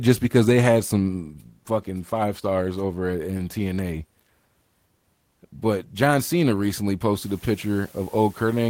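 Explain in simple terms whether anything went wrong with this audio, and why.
Low bit depth with dither appears from 7.2 s to the end at 8.7 s. The sound was stored with very few loudness steps, which fits 8-bit audio, and a little random noise was mixed in before rounding. That turns the rounding error into a steady, fairly loud hiss under the speech rather than harsh distortion.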